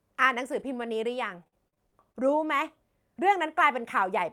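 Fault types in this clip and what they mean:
Lost packet rebuilt from error correction: three isolated 20 ms frames near 0.51, 0.59 and 0.81 s sound briefly rougher and noisier, with no gap.
Repeated packet loss (robotic sound): from 1.43 to 2.16 s, six closely spaced holes, up to 46 ms each, are patched by extending sound, producing choppy, robotic speech.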